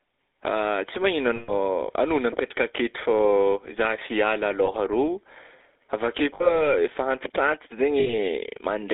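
Across the whole clip the speech carries the GSM full-rate codec. It sounds buzzy and gravelly. Pulse-driven vocal-tract modelling coarsens the excitation. The band runs only from 300 Hz to 3.6 kHz, which fits 13 kbps telephone coding.

Lost GSM frames occur at 1.36 to 1.51 s, 4.66 to 4.70 s, 6.34 to 6.63 s and 8.00 to 8.14 s. Each time, the decoder repeats the last good frame. The sound freezes into a rough, metallic ring.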